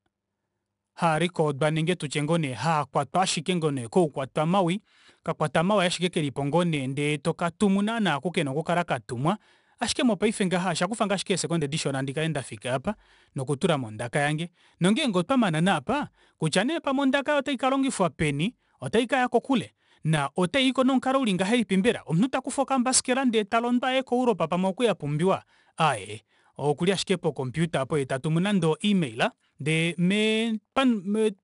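Speech encoded throughout with 4-bit ADPCM compression, at a rate that fits roughly 89 kbps. The coarse 4-bit steps leave a gritty hiss riding every loud syllable, with roughness on sharp onsets, and nothing is present above 10.6 kHz, dulling the top end.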